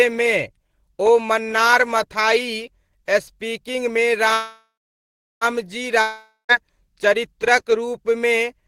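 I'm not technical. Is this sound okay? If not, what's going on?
No. There are two interruptions in the speech.

From 4.33 to 5.44 s there is a call audio freeze. The last sound stretches into a fading buzz and then about 0.7 s of silence. The speech then picks up exactly where it stopped, so nothing is lost, only delayed by about 1.1 s. The likely cause is data held up on the network.

From 6.01 to 6.52 s there is a long network dropout. It sounds similar, with a fading buzz and a short silence. But when the speech returns, it has skipped ahead, and about half a second of speech likely never arrived and is gone for good.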